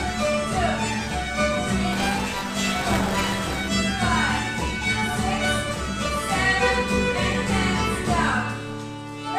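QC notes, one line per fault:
1.92–3.68 s, buffer tearing: the writer and reader of the output ring buffer have slipped out of step, so every period carries a slice of sound from about 20 ms earlier, roughly 15% of each buffer, butted against current audio with hard joins on both sides. The joins repeat 200 times a second, a 5 ms period, giving a rough robotic buzz over the signal. A spectrogram shows vertical striations and a 200 Hz harmonic comb, and the waveform shows regular step discontinuities.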